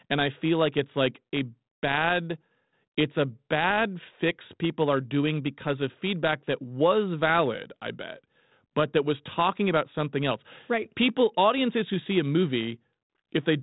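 There are no technical faults to describe at any point in time.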